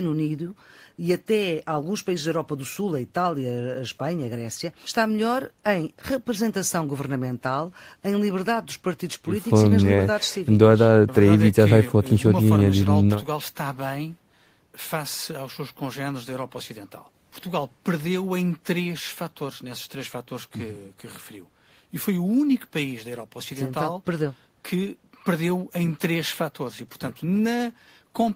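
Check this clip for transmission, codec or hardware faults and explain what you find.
Nothing here points to a transmission, codec or hardware problem; the speech comes across steady and intact all the way along.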